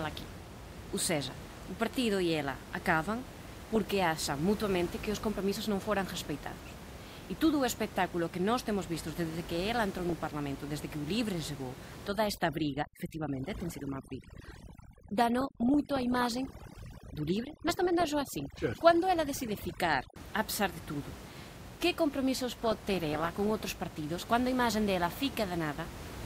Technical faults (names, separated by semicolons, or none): overdone noise removal; DAB burbling